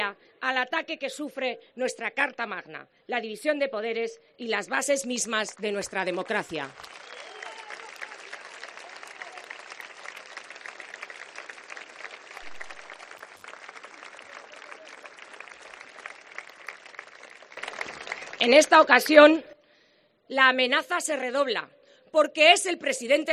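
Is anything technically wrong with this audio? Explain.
Yes. A sudden gain jump runs from 17.57 to 19.53 s: the level rises by about 12 dB at once, with no ramp, and background noise jumps with the sound. The likely cause is a gain setting applied abruptly between samples, then reverting.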